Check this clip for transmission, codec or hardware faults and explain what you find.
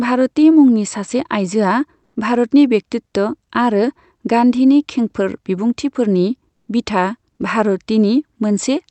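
One fault appears twice in this call audio, carried over a codec path whose high end stops near 8 kHz. Comfort noise in place of the background occurs at 2.03–2.15 s (120 ms) and 6.53–6.67 s (140 ms). The likely cause is the sender pausing transmission during silence, with the receiver filling the gaps with synthetic noise. The quiet room tone, about 55 dB below the loudest speech, turns into steady, featureless hiss, about 4 dB different in level in the first gap and unchanged in level in the second.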